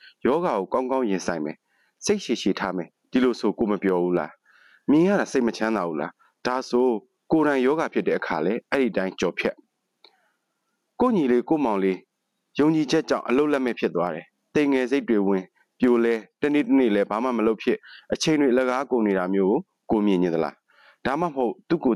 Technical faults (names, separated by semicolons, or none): gain pumping